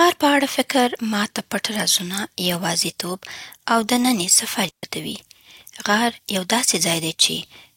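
At 4.69 s, just after "یوازیتوب او دنني سفر", the speech drops into a digital wireless dropout. It lasts about 144 ms and ends at 4.83 s. The receiver has lost too much data from the radio link. Rather than play corrupted audio, it mutes with a very fast fade. The result is a clean hole of near silence. No burst of noise comes before or after it. The speech simply stops, then resumes.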